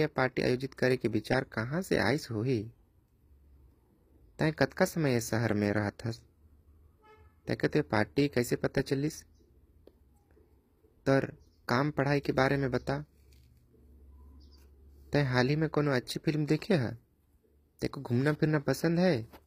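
A speech clip with plainly audible codec damage running the whole way through, and nothing above 15.5 kHz. The top end sounds rebuilt rather than real, likely HE-AAC compression at a low rate, around 24 kbps, copying lower bands up to fake the treble, so harmonics don't line up across the crossover.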